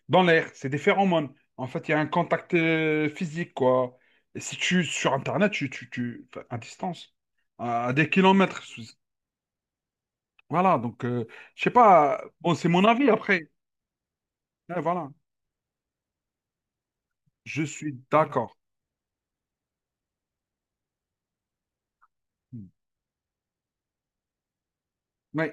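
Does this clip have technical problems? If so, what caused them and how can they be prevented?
No, no technical faults are audible in this speech recording, so nothing needs preventing.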